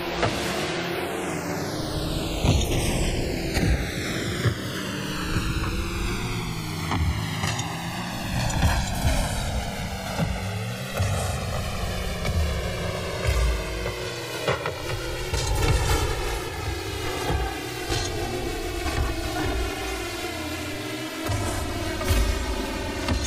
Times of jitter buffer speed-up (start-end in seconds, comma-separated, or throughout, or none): none